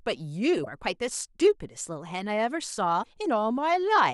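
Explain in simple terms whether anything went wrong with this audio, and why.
Yes, something went wrong twice. Part of the compressed speech stream was damaged, meaning some of its data was missing or scrambled. When the player reached those spots, it couldn't read them properly, lost its place, and had to hunt for the next readable chunk. You hear that as a brief chirp or blip, from 0.62 to 0.67 s and again from 2.99 to 3.06 s. Both are classic damaged data in a compressed stream.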